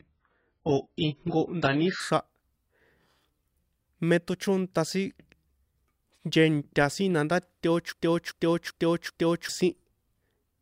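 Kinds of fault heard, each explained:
Adaptive stream starting at a low bitrate: the first 2.0 s sound dull and smeared, with nothing above 7.6 kHz, which fits a very low starting bitrate. Quality then jumps abruptly, with no gap. A spectrogram shows an empty band above 7.6 kHz that suddenly fills in at 2.0 s.
Broken-record loop: right after "nchenta sin nandá", from 7.92 to 9.49 s, a 0.39 s fragment plays four times back to back, likely from a stalled player or stream, and the audio due in that stretch is lost. The waveform shows identical blocks repeating every 0.39 s.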